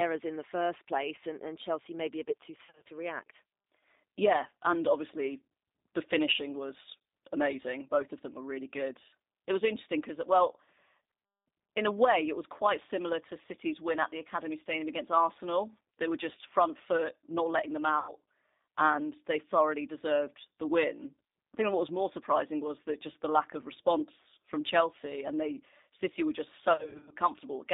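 The whole recording passed through a G.729 codec at 8 kbit/s, which models the voice as a vocal tract filter driven by a pitch predictor and a handful of pulses rather than sending the waveform itself. The line band runs only from 250 Hz to 3.7 kHz, so the low body and all the upper brightness are gone, and the coding damage is plainly audible as a rough, synthetic quality to the speech.

Packet loss then struck three times, each time concealed by the speech codec. From 2.65 to 2.90 s, right after "maybe a bit too", about 160 ms of audio went missing in scattered gaps across a 240 ms stretch, the longest single run 40 ms. From 17.99 to 18.13 s, after "foot not letting them", about 90 ms was lost. From 26.73 to 27.12 s, after "were just", about 240 ms vanished across 380 ms, the longest run 50 ms. In each gap the decoder had nothing new, so it kept extending its last pitch and filter at falling gain. 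The speech smears into a buzzy or noisy tone that fades. Because each frame is built from the previous one, the voice stays weak or distorted for a short time after real packets resume.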